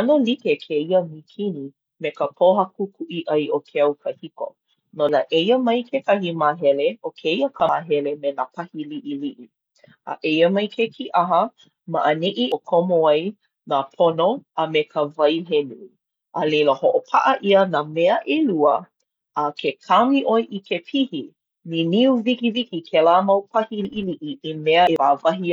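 Compressed frames are skipped at 5.09 s, 7.60 to 7.69 s, 12.52 s, 23.85 to 24.13 s and 24.87 to 24.96 s. Whole frames are not played, so the speech leaps forward by roughly 100 to 300 ms each time.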